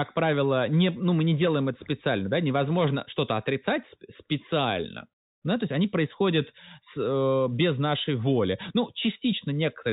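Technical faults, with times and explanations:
No technical faults detected.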